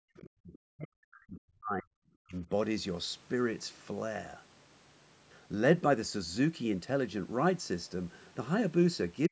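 It's a speech clip with some classic speakerphone trouble. Right at the start, 0.16 to 0.22 s, there's a faint scrap of the other side's voice leaking through, sitting roughly 25 dB under the talker, most likely loudspeaker echo that the echo canceller didn't fully remove from the mic. Straight after that comes speech suppressed in double talk: the talker's voice drops away by around 40 dB from 0.23 to 1.92 s, again from 2.23 to 2.5 s, and in the last few tens of milliseconds from 9.28 s to the end. That's likely the canceller ducking everything while both sides were talking at once, because it couldn't tell the talker from the echo.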